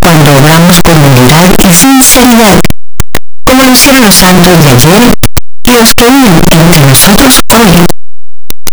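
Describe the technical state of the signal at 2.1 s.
At 2.1 s, as across the whole clip, the speech is buried in loud, harsh distortion with quiet stretches as loud as the rest, likely from signed and unsigned mixed up in the 8-bit samples: the flipped top bit turns every zero crossing into a full-range jump. Plain 8-bit rounding would add only faint grain.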